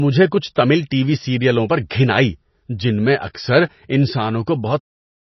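Speech, and it's pretty mangled throughout: everything above about 5.9 kHz is simply gone, and the sound has that watery, swirly texture with smeared attacks, which fits heavy MP3 compression at a very low bitrate, likely somewhere near 24 kbps. At 3.34 s there's a pre-echo: a quick burst of hiss, about 11 ms, lands just ahead of an attack because the codec spreads its noise across the whole block, so it leaks into the quiet moment before the sound actually hits. The fade-out running from 4.81 s to around 5.0 s is smooth, with no click at the end.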